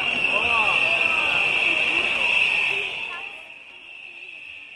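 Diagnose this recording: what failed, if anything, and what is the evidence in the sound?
Zipper noise runs from 2.64 to 3.64 s as the level drops by roughly 20 dB. The gain is applied in unsmoothed 1 dB steps, around 30 per second, likely at the buffer stage, and each jump leaves a small click, heard as a fast ticking.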